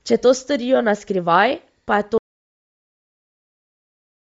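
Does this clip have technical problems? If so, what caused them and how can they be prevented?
Yes, two. The speech has a grainy, breathy edge all the way through, and nothing comes through above 7.7 kHz. That's the signature of Bluetooth LC3 compression, the LE Audio codec, likely running at a low rate. The damage is plainly audible and fits something around 32 kbps with 10 ms frames, where the encoder throws away upper detail and patches it with noise. To avoid it, record on a wired mic or a higher-rate link.

Then at 2.18 s the sound drops out to silence and stays gone right to the end. It's plain silence, with no room tone underneath, so the input signal itself was lost while the recorder kept writing. That points to a disconnected device, a failed wireless link or an accidental mute. Whatever was said after that point simply isn't there. Keep an eye on live input meters and check connections and link stability before recording.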